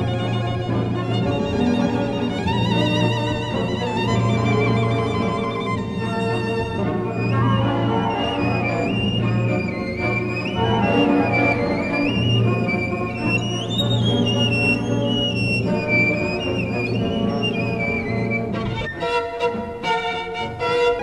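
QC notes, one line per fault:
1.81–1.87 s, 18.81–18.87 s and 20.95–21.00 s: damaged data in a compressed stream. At each of these three points, roughly 55 to 60 ms of the encoded stream arrives corrupted, so the decoder cannot read those frames correctly. It loses sync and scans forward for the next valid frame header, and the misread data is heard as a short, harsh glitch that breaks the sound before normal decoding resumes.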